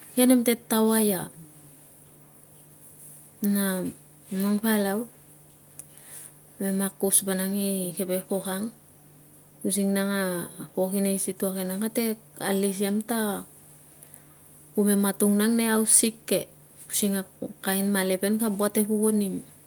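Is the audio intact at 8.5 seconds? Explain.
Yes, the audio is intact at 8.5 s, with no dropout, click, distortion or other fault at that moment.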